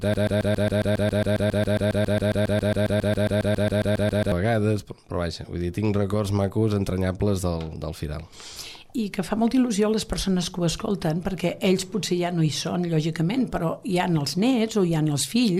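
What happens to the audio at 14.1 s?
Nothing goes wrong at 14.1 s; the audio plays through that moment intact, with no dropout, glitch or distortion.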